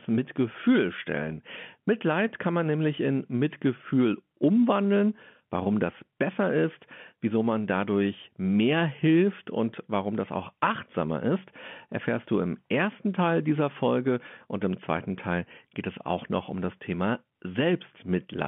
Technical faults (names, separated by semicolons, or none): none